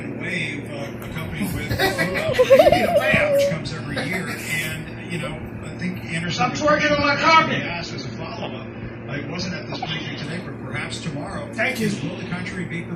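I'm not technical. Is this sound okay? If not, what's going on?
No, not entirely. From about 6.24 s to 10.24 s the sound suddenly turns fizzy or watery, then snaps back to normal, with no gap either way. That's an adaptive stream dropping to a lower bitrate. When a connection slows, streaming players switch to a lighter, lower-quality version so playback doesn't stall. That adds digital smearing for those four seconds until the better version returns.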